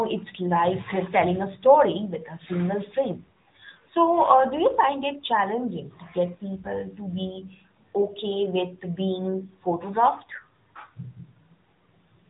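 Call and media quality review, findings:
AMR narrowband mobile codec across the whole speech clip, plausibly near 10 kbps: 8 kHz-sampled vocal-tract model, few pulses per subframe. Nothing above 3.8 kHz; plainly audible buzzy, synthetic edge.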